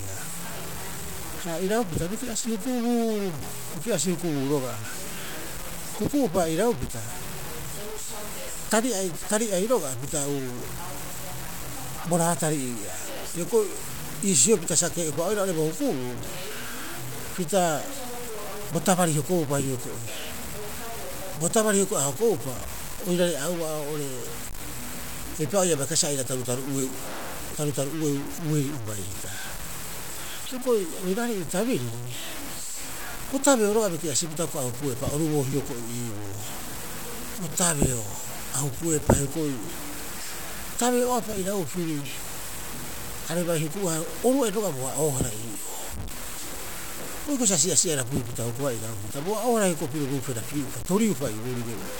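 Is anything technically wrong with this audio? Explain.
Yes. Low bit depth without dither runs through the whole clip, from start to finish. The grain sounds like about 6-bit resolution, likely from samples being truncated to a few levels with no dither. Without dither the rounding error follows the speech, so it is heard as distortion that shifts with each sound rather than as steady hiss. That error sits only around 10 dB below the signal. Quiet passages turn gritty, and the softest moments sputter or drop out.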